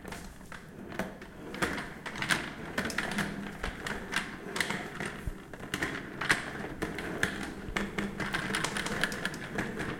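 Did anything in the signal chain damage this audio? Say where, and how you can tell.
Yes, a doubled audio track kicks in abruptly at 7.96 s and runs to the end: a clean, full-band copy trails around 200 ms behind, about 5 dB down, with no room colour. Likely a slower second capture path or an edit holding two misaligned copies.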